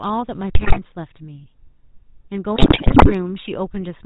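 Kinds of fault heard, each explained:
GSM full-rate codec: The speech has been squeezed through the original GSM coder, which models the vocal tract as a filter driven by a sparse, regularly spaced pulse train that keeps only every third excitation sample, and passes nothing above 4 kHz. Throughout the clip the damage is plainly audible: a dull, band-limited voice with a buzzy, gravelly roughness, consistent with a 13 kbit/s full-rate stream.
GSM bit errors: Flipped bits reached the speech decoder and scrambled the filter, pitch and gain values for the frames they struck, bending the spectrum and making the level jump from frame to frame. It happens twice, from 0.55 to 0.79 s and from 2.56 to 3.12 s. In both spans the voice breaks into squawks, pops and gargling, and the second, longer burst sounds the more heavily corrupted.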